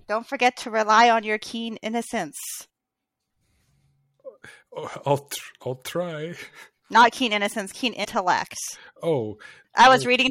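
The likely cause is a broken MP3 bit reservoir: frames were dropped, so the frame after them reached back for data it had stored earlier in the stream and decoded bytes that belonged to a different frame. In this speech, just after "keen innocence keen", a brief glitch runs from 8.03 to 8.06 s and the audio skips ahead. Its length, about 26 ms, matches a single MP3 frame of 26.1 ms.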